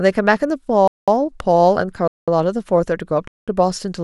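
From 0.12 s to the end, clock slip clicks form a soft rattle of ticks roughly every 0.05 s across the speech. Each is a single dropped or repeated sample, likely from two unsynchronised clocks drifting apart by roughly 400 parts per million.

A gap between chunks cuts the audio at 0.88 to 1.08 s, 2.08 to 2.28 s and 3.28 to 3.48 s. Each 200 ms hole falls at a join between 1.0 s blocks, where silence was inserted between consecutive chunks.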